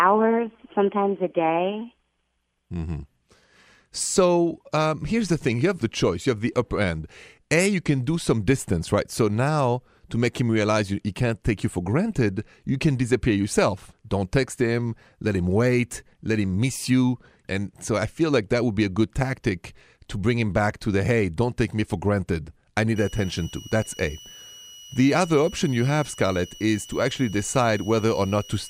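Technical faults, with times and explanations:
22.96–28.70 s, switching supply whistle: a thin high whistle near 3 kHz, wandering between 2.9 and 2.96 kHz and sitting roughly 20 dB under the speech until the end. A switching power supply is running in an audible burst mode, its cycling rate shifting slightly with load.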